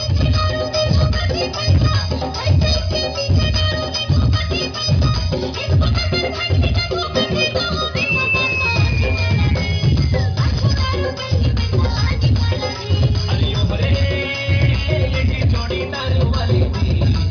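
Nothing stood out as a technical problem on listening.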